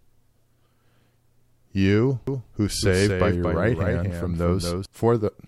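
From 2.27 s to 4.85 s a doubled audio track appears, likely because the speech is captured again through a slower path. A full-band copy trails by roughly a fifth of a second, a few decibels quieter and dry, and it starts and stops abruptly.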